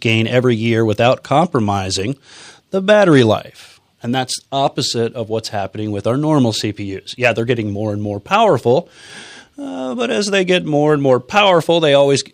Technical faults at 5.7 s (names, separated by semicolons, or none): none